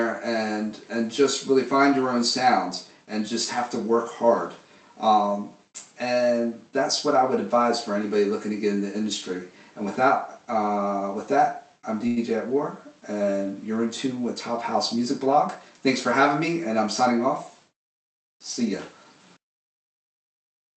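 At 12.07 s there's a short stall from a late packet: the buffer ran dry, so the receiver stretched the last sound for about 92 ms, then picked up exactly where it left off. From 14.75 to 15.88 s you get a jitter buffer speed-up, with small pitch-period chunks trimmed to claw back about a tenth of a second, so the sound runs roughly 7% fast at unchanged pitch.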